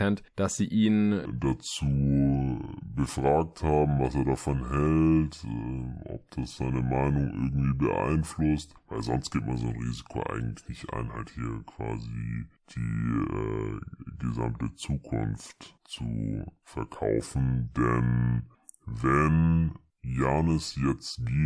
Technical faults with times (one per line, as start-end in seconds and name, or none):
1.25-21.45 wrong sample rate